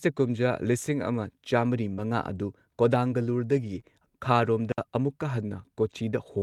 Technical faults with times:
1.93-2.00 short concealed packet loss
1.98-2.00 lost packet rebuilt from error correction
3.48-3.78 lost packet rebuilt from error correction
3.80-3.83 short concealed packet loss
4.41-4.47 lost packet rebuilt from error correction
4.72-4.78 digital wireless dropout

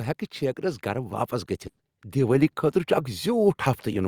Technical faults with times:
0.38-1.39 automatic gain rising
1.67-1.82 burst of packet loss

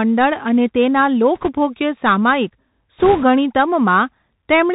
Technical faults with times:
0.00-4.75 Bluetooth CVSD headset codec
1.35-1.50 bit errors on a Bluetooth voice link
2.98-3.24 bit errors on a Bluetooth voice link

